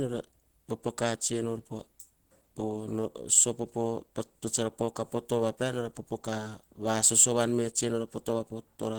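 A speech clip with plainly audible Opus compression throughout, likely from a low-rate hybrid-mode encode fitting about 16 kbps: hoarse, grainy, muffled, with a noise-filled spectrogram up to 20.1 kHz.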